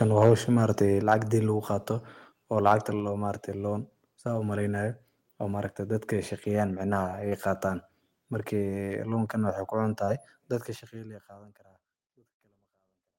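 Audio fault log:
0.01–0.33 s, 1.11–1.14 s and 2.66–2.74 s, microphone overload: the input gain was likely set too high, driving peaks about 3 dB past the converter's ceiling. A small share of samples are flattened at the converter's limit, so the loudest syllables take on a harsh, crackling edge.
1.02 s and 3.0 s, microphone volume stepped down: the call software likely judged the input too hot and lowered the device's input volume in single steps, about 4 dB then about 2 dB. The level of both the speech and the background drops abruptly at each step.
7.29–7.33 s, 8.85–8.89 s and 10.05–10.09 s, short concealed packet loss: each time, 20 ms of audio failed to reach the decoder in time. The receiver filled the gap by extending the preceding sound, then blended back into the real signal, leaving a brief smear or wobble.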